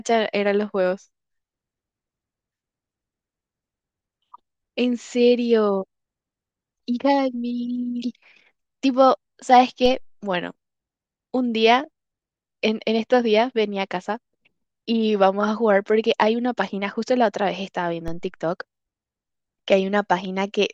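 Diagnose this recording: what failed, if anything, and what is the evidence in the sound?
A DC step at the converter occurs twice, at 9.86 s and 18.08 s. Each is a low thump where the waveform's zero line jumps by about -21 dBFS, then drains away through a roughly 2 Hz high-pass. Unlike a dropout or click, the speech continues unbroken.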